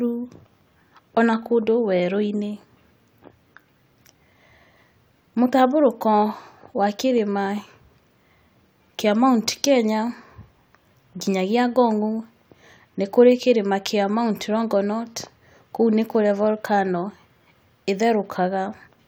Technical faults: none

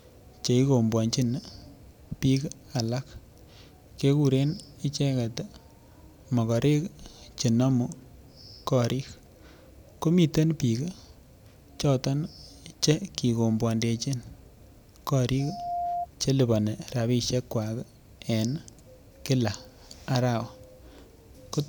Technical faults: loudspeaker feedback squeal

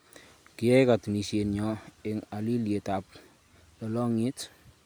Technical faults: none

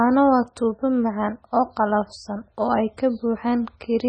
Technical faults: MP3 compression

